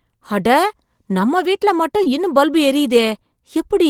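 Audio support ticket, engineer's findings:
Brief smear at 2.03–2.08 s, about 40 ms. Short concealed packet loss: audio arrived too late for the decoder, so the receiver extended the preceding sound, then blended back.

Rougher, noisier 20 ms patch at 2.05–2.08 s, fitting a single lost packet. Lost packet rebuilt from error correction: the decoder played the low-bitrate Opus in-band FEC copy from the following packet.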